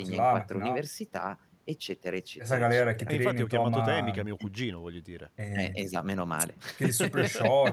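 Nothing in the recording stood out as a technical problem on listening.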